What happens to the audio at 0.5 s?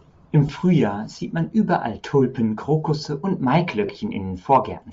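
Just before the half-second mark, from 0.47 to 0.49 s, the speech briefly turns into a short noisy smear for about 20 ms. These are lost LE Audio frames: when packets failed to arrive, the decoder concealed the gap by repeating the last received spectrum with randomised signs, so the signal continues as a grainy wash rather than a hard dropout. The 20 ms gap fits two missing 10 ms frames, too short for the concealment to fade into silence.

Around that moment, as across the whole clip, the speech has a breathy, grainy edge, with a dulled, noise-filled top end that is plainly audible. This likely comes from Bluetooth LC3 compression at a low rate, around 32 kbps with 10 ms frames. At that rate the encoder discards much of the upper spectrum and fills those bands with synthetic noise in place of the real detail.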